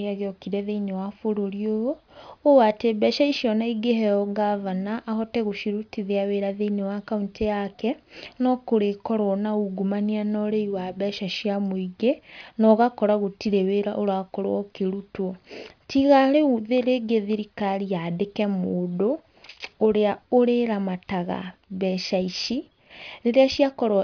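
No technical faults are audible.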